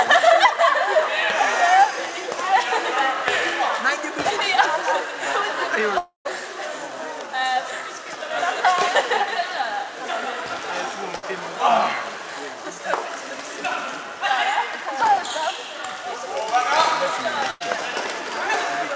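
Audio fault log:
5.98–6.31 s, long network dropout: the last sound is stretched into a buzzy hiss that fades over a few tenths of a second, leaves about 0.12 s of near silence, then resumes with roughly 0.28 s of audio gone. An interrupted stream likely caused this.
11.16–11.24 s and 17.50–17.62 s, burst of packet loss: each time the receiver holds and fades the preceding sound to cover missing packets, then jumps ahead, skipping about 60 ms and about 100 ms. The fill stops at 8 kHz, consistent with the G.722 call path.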